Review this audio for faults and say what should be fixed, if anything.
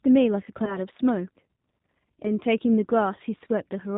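The G.729 codec is audible throughout the speech. It rebuilds each 10 ms frame from a vocal tract filter, a pitch predictor and a few pulses, giving a rough, synthetic texture that fits 8 kbit/s coding, with nothing above 4 kHz. Prevention: carry the call on a wideband codec such as G.722 or Opus instead of G.729.

VoIP packet loss concealed by the speech codec occurs from 0.65 to 0.79 s. About 20 ms of audio went missing, consistent with a single lost packet. The decoder extended its last pitch and filter at falling gain, producing a brief fade, and the damage persists until the predictor state recovers. Prevention: add jitter buffering with forward error correction or packet redundancy on the network path.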